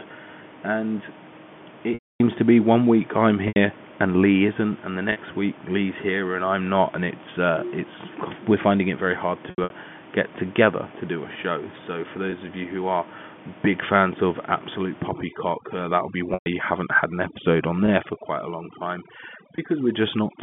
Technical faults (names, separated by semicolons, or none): packet loss with pitch repetition; overdone noise removal